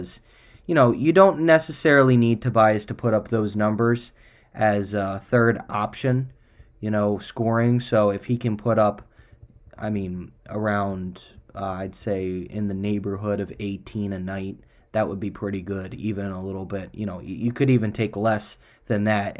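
No technical faults can be heard anywhere in the recording, and the signal stays steady and intact for its whole duration.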